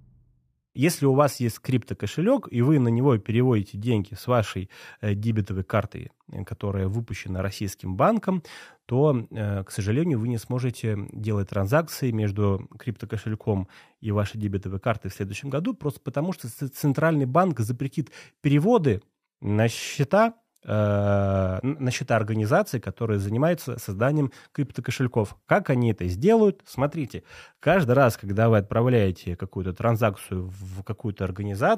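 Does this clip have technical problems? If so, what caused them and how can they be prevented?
No, nothing in this speech recording calls for a fix, so there is no cause to trace and nothing to prevent.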